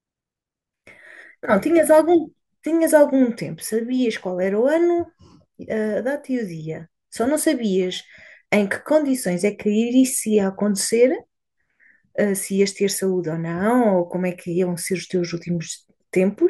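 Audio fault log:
4.03 to 16.50 s, crude rate conversion: from 4.03 s to the end, the speech carries a gritty, inharmonic fizz that tracks loud and bright syllables. The pattern fits a linear-interpolation change from 48 kHz to 44.1 kHz with no anti-aliasing filter, leaving unrelated tones roughly 30 dB below the signal.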